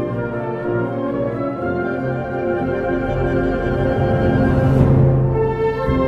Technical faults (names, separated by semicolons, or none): none